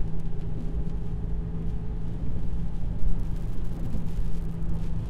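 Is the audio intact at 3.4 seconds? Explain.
No. From 2.98 to 4.77 s a steady crackling fizz runs through the sound: an unreliable data bit randomly flips samples, each error a spike about 37 dB below full scale.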